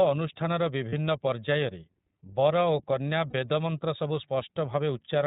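From the start, the whole clip runs through the iLBC codec, and the damage is easy to hear. Nothing above 4 kHz survives, so the speech is dull and boxy, and the excitation coding gives it a slightly rough, synthetic edge. Each 30 ms frame is coded on its own without help from the previous one, and the texture fits the 13.33 kbps mode that uses those longer frames.

At about 0.90 s and again at about 3.30 s there are lost iLBC frames, one 30 ms frame each time. With nothing arriving, the decoder covers the hole by repeating the last pitch cycle with some noise mixed in, so each gap comes across as a brief held, faintly buzzy vowel. Because iLBC frames stand alone, the speech snaps straight back to normal once the next frame lands.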